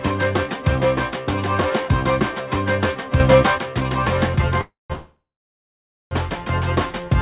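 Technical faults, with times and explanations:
3.20 to 3.58 s, sudden gain jump: At 3.20 s the level steps up by about 6 dB from one sample to the next, and it drops back at 3.58 s. The background noise rises and falls with the sound, so the whole signal is scaled, not just one source. The edges are abrupt, with no fade. The likely cause is a digital gain change applied without a ramp.
4.61 to 6.14 s, call audio freeze: Two freezes run back to back. The first lasts 4.61 to 4.93 s, and the second lasts 4.93 to 6.14 s. Each starts with the last sound drawn out as a fading buzz or hiss, and then silence follows. The silence lasts about 160 ms in the first freeze and about 880 ms in the second. Nothing is skipped. The audio picks up where it stopped, so everything after it arrives roughly 1.5 s late. This likely comes from delayed packets emptying the jitter buffer on the G.711 call path.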